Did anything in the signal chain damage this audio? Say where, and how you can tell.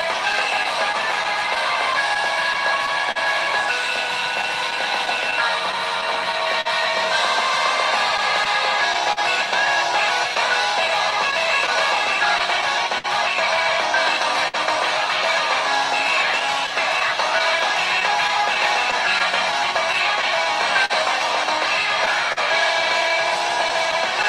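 Yes. At the jitter buffer, clock drift between sender and receiver: the sender's clock runs roughly 3 percent slow, so the buffer keeps draining, causing irregular timing hiccups throughout.

On the network, scattered short gaps from 0.01 to 14.6 s and 16.4 to 24.3 s: dozens of brief losses, each under about 50 ms, concealed by extending prior sound, heard as ticks and smears.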